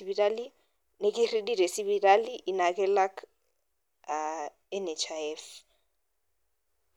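No technical faults are audible.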